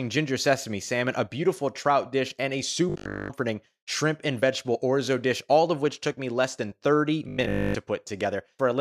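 A speech clip with robotic sound from repeated short buffers in two places: 2.90 to 3.36 s, between "trout dish and a" and "shrimp and vegetable orzo", and 7.29 to 7.76 s. The speech collapses into a rigid metallic buzz at 50 Hz, likely from a 20 ms block being replayed for most of each stretch. Unlike a sweeping flanger, that pitch stays fixed whatever the speaker does.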